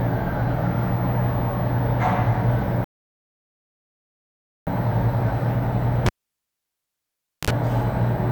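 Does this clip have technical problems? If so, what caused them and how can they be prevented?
Yes. Playback stall, 2.84 to 4.67 s: the sound stops dead for about 1.83 s and then resumes, likely because the player's buffer ran dry or its thread was blocked. A larger playback buffer and a non-blocking audio thread prevent this.

Cable pulled and plugged in, 6.06 to 7.51 s: a pop, about 1.39 s of near silence, a 55 ms burst of 50 Hz mains buzz as only the tip made contact, then a second pop. Muting the input before changing connections prevents it.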